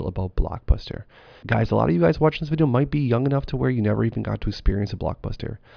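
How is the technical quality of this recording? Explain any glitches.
No glitches turn up anywhere in the recording. Nothing in it calls for an explanation.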